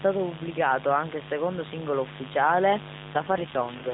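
A mains buzz runs under the whole clip. It is a steady, raspy buzz, about 15 dB below the speech. Sharp switching spikes leak in twice every 50 Hz cycle. Their harmonics stack up from 50 Hz into the kilohertz range.

At 3.14 s, just after "il secondo singolo ufficiale", an AMR rate drop begins. It lasts to the end of the clip. The voice turns rougher and more synthetic. The narrow telephone band stays the same, and nothing drops out. The sound fits the codec stepping down from 12.2 to 5.9 kbps to protect a weak radio link.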